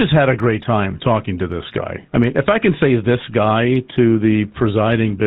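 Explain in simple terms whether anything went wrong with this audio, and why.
The speech went through the GSM full-rate codec, an early mobile-phone format that rebuilds the voice from a rough model driven by regular pulses and drops everything above 4 kHz. Throughout the clip, this leaves the voice muffled and plainly buzzy and gravelly.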